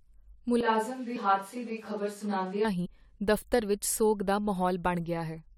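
At 0.61 s the speech suddenly goes roomy and hollow, with the low end thinned out and the level dropping roughly 5 dB. Room noise comes up too, sitting around 30 dB under the speech. That sudden change in character is a switch to a distant microphone, most likely because the close mic's signal dropped out and a mic further back filled in. It snaps back just as abruptly at 2.65 s.

Inside that stretch, at 1.15 s, there's a short glitch where the audio lurches forward by around 50 ms. That's compressed frames skipped: the decoder never played whole frames, so the sound jumps ahead by a frame multiple. The same thing happens again from 2.85 to 2.87 s, this time losing around 70 ms.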